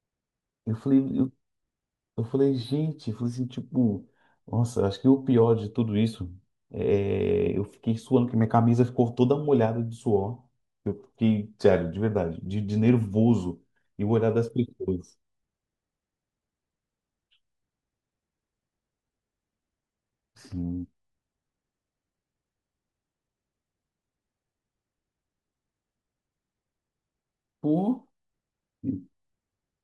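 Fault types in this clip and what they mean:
No faults are audible here.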